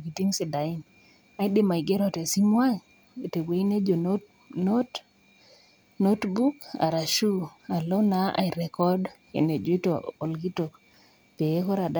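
Nothing stood out on listening to this speech recording.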